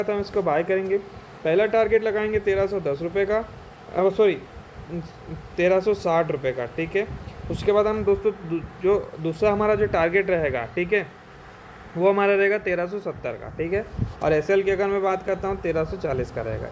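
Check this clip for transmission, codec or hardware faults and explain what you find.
No transmission, codec or hardware faults can be heard anywhere in the clip. Nothing in the audio calls for further explanation.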